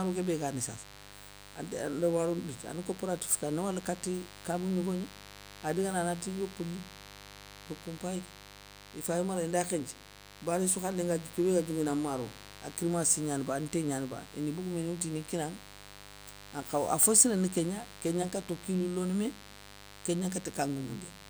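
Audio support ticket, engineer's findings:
Mains buzz, throughout the speech. Steady raspy buzz about 20 dB below the voice, built on 50 Hz harmonics reaching into the kHz range. Probable component: dimmer, rectifier or unshielded cable. Sharp switching spikes twice per mains cycle coupling into the signal path.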